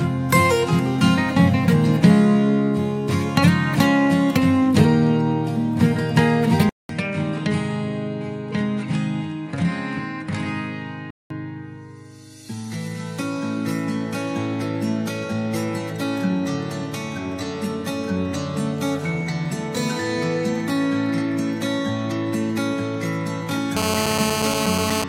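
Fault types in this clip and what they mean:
Input switched to a poorer device: likely cause of a 200 ms gap, then sound stopping at 10.5 kHz and about 5 dB quieter; spectrogram loses everything above that line.
GSM phone buzz: steady raspy buzz at 217 Hz from a phone in a call, only about 2 dB below the signal; spectrogram shows evenly spaced horizontal harmonic lines.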